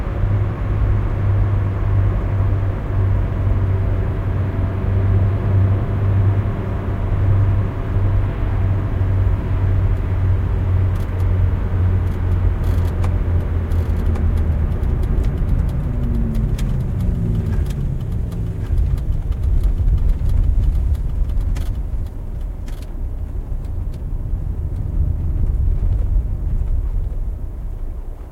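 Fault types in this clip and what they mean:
Doubled audio track: The sound was likely captured a second time through a slower path, or an edit left two copies out of step. A full-band copy trails the original by about a second throughout, roughly 5 dB quieter, with no decay or room colour.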